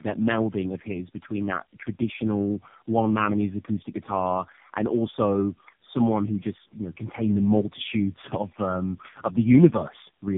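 Throughout the clip, tandem speech coding is at work. The call went through three narrowband speech coders in a row, each one re-encoding the previous one's damage, and the sound points to low-rate AMR-NB. The speech comes out rough, muffled and warbly, with nothing above 3.7 kHz.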